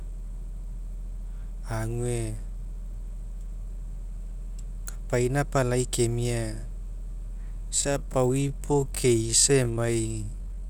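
A speech clip whose final stretch, from 7.7 s to the end, abruptly slows to about 0.65 times its pace while the pitch holds steady, leaving the audio dragging. This is likely a time-stretched section, lengthened by software that repeats short pieces to keep pitch unchanged.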